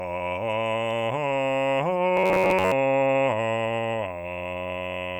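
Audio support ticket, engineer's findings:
Robotic sound from repeated short buffers, 2.17 to 2.72 s in the music. Rigid metallic buzz near 94 Hz, following the music only roughly. Likely cause: playback buffer underrun. Period about 10.7 ms. Same slice looped for most of the span. Real audio skipped meanwhile. Loop rate sets the fixed pitch.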